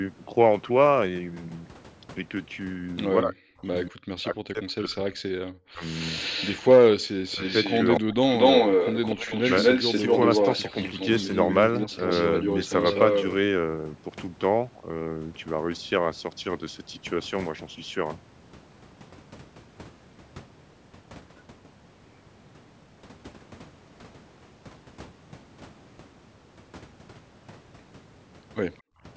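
From 3.23 to 5.83 s, speech suppressed in double talk: with both sides talking at once, the echo canceller likely mistook this talker for loudspeaker echo and pulled the level down. About 2 s of the speech dips or breaks up, at worst by around 40 dB.

At 5.99 to 6.71 s comes an echo leak, likely from a loudspeaker-side canceller that failed to remove its own pickup. A copy of the speech returns 238 ms late, roughly 10 dB below the original.

From 7.00 to 7.07 s the echo canceller gates the background: it clamps the microphone while the loudspeaker plays. For 70 ms the room sound falls away by about 39 dB, then comes back.

From 7.29 to 13.27 s, a longer echo leak brings back the 238 ms repeat at roughly the same level as the speech itself. Inside that stretch the double-talk suppression cuts in twice. At 7.35 to 7.42 s it is a brief dip of about 10 dB. At 8.0 to 8.2 s it is a near dropout of about 40 dB.

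At 28.82 to 29.03 s the background is gated again by the echo canceller, and the room sound drops by about 39 dB for 200 ms.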